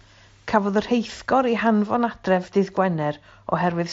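No technical faults occur in this clip, so there is nothing to place in time order.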